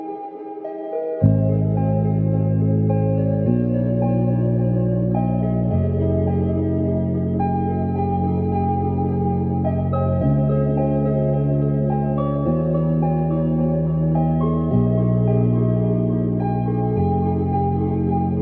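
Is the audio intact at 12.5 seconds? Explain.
Yes, at 12.5 seconds the audio is intact, with no dropout, click, distortion or other fault at that point.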